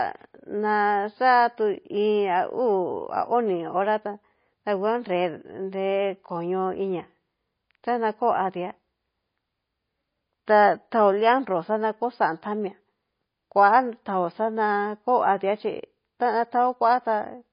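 Throughout, the speech sounds watery and swirly, with nothing above 5.1 kHz. This is likely MP3 compression starved of bits, which fits a bitrate near 24 kbps.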